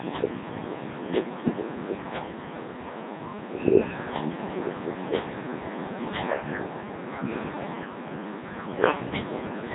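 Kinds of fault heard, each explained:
Codec 2 vocoder: the speech is rebuilt from sine waves, heavily robotic and buzzy, with nothing above 3.8 kHz. Unlike plain band-limiting, the original waveform itself is gone.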